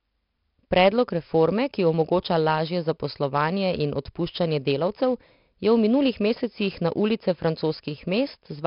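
4-bit ADPCM compression runs throughout this speech clip. Each sample is coded as a coarse step from a prediction, leaving a heavy gritty hiss that follows every loud syllable and smears attacks. Nothing sounds above 5.3 kHz, which fits a low sample rate, with the bitrate near 44 kbps.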